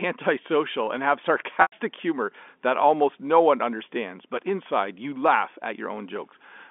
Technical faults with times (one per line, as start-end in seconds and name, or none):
1.62-1.72 packet loss with pitch repetition